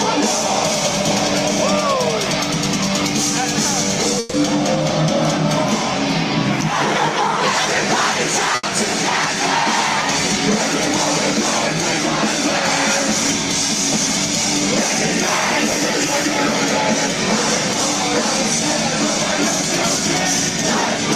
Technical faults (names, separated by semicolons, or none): burst of packet loss; chunks out of order